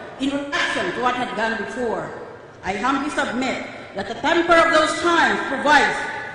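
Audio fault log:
0.35–0.59 s and 4.15–4.22 s, AAC frame loss with concealment: the decoder lost about 171 ms (roughly four frames), then a single frame of about 43 ms, and patched both gaps from the last good spectrum, so each spot turns briefly smeared and phasey.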